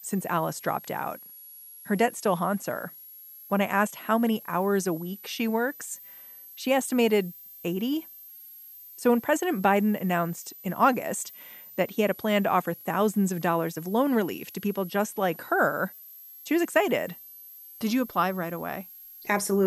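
A thin, high whistle sits under the speech for the whole clip, wandering between about 11.3 and 12.6 kHz at roughly 20 dB below the voice. This is switching supply whistle: a switched-mode power supply running in an audible burst mode or beating with another supply, its frequency shifting as the load changes.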